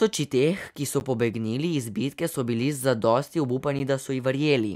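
At 1.0 s and again at 3.79 s, the speech drops out in a block of digital silence about 10 ms long, where the audio cut to silence, most likely because the output buffer was not filled in time. The gap is so short that each one comes across as a tick or dip.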